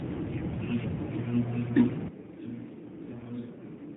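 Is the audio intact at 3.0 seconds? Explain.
No. From 2.08 s to the end, the sound has switched to a distant microphone. The close microphone's feed was likely lost, leaving a pickup further from the source. The sound turns roomy and hollow at once and loses bass. It drops by about 10 dB. Room noise sits about 35 dB below the speech. It stays that way for the rest of the clip.

Just after, from 3.02 s to 3.29 s, AMR bit errors cut in. They last about 0.27 s, which fits roughly 13 corrupted 20 ms frames. The link flipped around 7 percent of the bits. The weakly protected bits arrived wrong, while the checksum on the key bits still passed. So the excitation pulses and the fine gain and spectral values are misplaced. Pitch and level hold roughly steady, but the sound turns hoarse, scratchy and gargly. This sits on top of the normal narrowband band limit of the 12.2 kbps AMR-NB codec.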